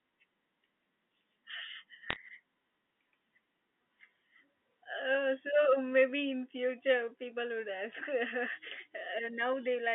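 A brief burst of sharp ticks and crackle lands between 2.1 and 2.16 s over the telephone-band speech. These are bit errors on a digital phone line: a rate around one or two percent flips bits in the G.711 stream, and each flip corrupts a single sample, with hits on high bits turning into clicks.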